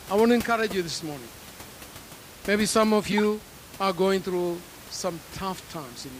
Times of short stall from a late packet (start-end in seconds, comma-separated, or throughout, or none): none